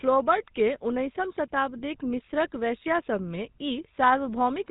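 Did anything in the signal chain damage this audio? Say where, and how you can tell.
Yes. The speech has a buzzy, gravelly roughness from start to finish, and nothing is heard above 4 kHz, so it sounds dull and narrow. That damage comes from the codec stage, and the texture is the signature of the GSM full-rate codec, which fits a 13 kbps stream. The codec imitates the vocal tract and drives it with an evenly spaced pulse train that keeps only a third of the excitation samples, and that coarse excitation produces the plainly audible grit.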